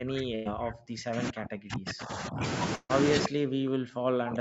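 From 0.0 to 2.43 s the talker keeps dipping and cutting out in pieces, falling as much as about 40 dB, for roughly two seconds in all. This is likely speech suppressed in double talk: with both sides speaking, the echo canceller turned the talker down along with the echo.

Inside that stretch, from 0.35 to 0.47 s, the last sound is held and fades, and then the audio resumes about 100 ms further on. That is a burst of packet loss, where the receiver stretched the last good audio over the missing packets. A second burst runs from 2.75 to 2.91 s. It fills about 140 ms the same way and trails off into roughly 30 ms of silence before the audio picks up again.

From 3.24 to 3.28 s a brief copy of the talker's own sound slips through, about 10 dB below the speech and about 0.4 s behind it. This is likely echo leak: the far end's loudspeaker was picked up by its microphone, and the residue was not fully cancelled.

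From 3.26 s to the end the talker is again pulled down in pieces, by as much as about 40 dB, likely as double-talk suppression returns.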